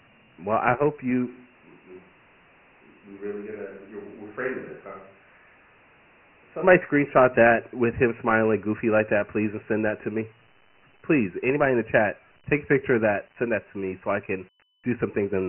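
Dialogic VOX ADPCM runs through the whole recording: the speech was squeezed into coarse 4-bit adaptive steps at 24 kbps, which fits a 6,000-sample-per-second rate, so nothing survives above 3 kHz and a heavy, gritty hiss trails every syllable.

A switch to a distant microphone comes at 1.29 s, right after "I hope", and lasts until 6.61 s, just before "screenshot that with him". The voice turns hollow and roomy, drops by about 10 dB, and room noise rises to about 25 dB below the speech. The likely cause is a failed or missing close microphone.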